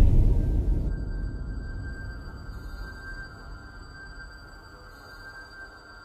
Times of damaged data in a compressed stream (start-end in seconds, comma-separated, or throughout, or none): 0.84-0.90